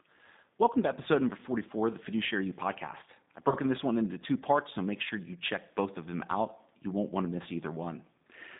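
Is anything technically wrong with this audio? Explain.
Yes, two faults. The G.729 codec affects the whole clip: sound is confined to roughly 150 Hz to 3.7 kHz. The plainly audible synthetic roughness, beyond what a plain telephone band-limit would cause, comes from pulse-coded frames and fits an 8 kbit/s coder.

VoIP packet loss concealed by the speech codec occurs from 3.49 to 3.56 s. About 30 ms went missing, consistent with a single lost packet. Unlike a clean dropout, there is no silence. The decoder stretches its last frame into a sound that fades, then recovers sluggishly.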